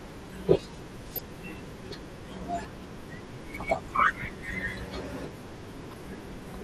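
Throughout the speech the sound is dull and plainly gurgling, with a granular grit and an upper range that seems to flicker in and out. This is the sound of MP2 compression, likely at a low rate around 80 kbps. Layer II divides the signal into 32 sub-bands and shares bits among them, so when bits run short the top bands drop out and the rest are quantised coarsely.

At 1.14 to 1.25 s, again at 3.14 s, and at 5.90 to 6.00 s, brief burbling blips cut across the speech. This is DAB burbling. It sounds like a small fraction of a percent of bit errors slipping past error correction into the MP2 data. Corrupted samples put short blips of noise into single sub-bands, and corrupted scale factors make sub-bands jump in level for up to a frame.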